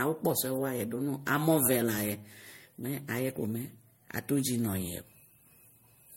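Throughout the speech there is generation loss: a swirling, hollow smear, blurred consonant attacks and nothing above 16.6 kHz. The damage is heavier than one pass of the 64 kbit/s MP3 it resembles would leave, likely from repeated re-encoding, about four times.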